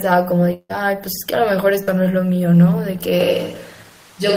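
From 0.53 to 0.71 s the sound stretches into a fading buzz that drops to silence for about 0.04 s before resuming, with roughly 0.16 s missing. This is likely a long network dropout. On a spectrogram, the last harmonics smear flat and fade into a blank strip.

At 1.83 to 1.89 s a short concealed packet loss leaves a brief wobble where 0.04 s never arrived and the decoder carried the previous sound forward before blending back. The spectrogram shows a short band of frozen, smoothed harmonics, and the waveform shows a slightly repetitive envelope.

From 3.21 s to the end the sound abruptly turns roomy and hollow, with thinner bass, at a similar level, and background noise sits about 30 dB below it. This is likely a switch to a distant microphone. The spectrogram shows weaker lows, reverberant tails and a raised noise floor.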